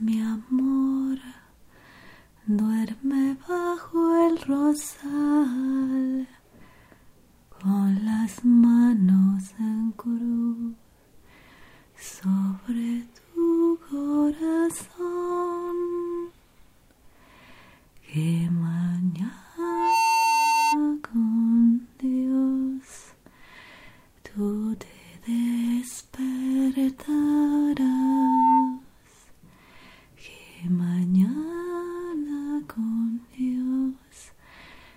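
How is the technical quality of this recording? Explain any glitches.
The recording is marred by two bursts of loudspeaker feedback squeal, from 19.63 to 20.80 s and from 27.79 to 28.80 s. A microphone picked up its own loudspeaker and the loop gain passed unity at 903 Hz, so a pure tone swelled up, quickly the first time and more gradually the second, to sit a few decibels above the audio before cutting off.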